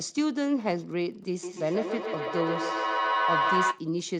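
Wi-Fi interference runs throughout: a nearby radio's beacon, rectified by the audio circuit, ticks faintly every 102.4 ms, showing as evenly spaced thin vertical lines on a spectrogram.

From 1.43 to 3.91 s a feedback howl builds as the speech loops between two devices, narrowing to a band near 1 kHz, pulsing about every 150 ms and peaking about 3 dB above the speech.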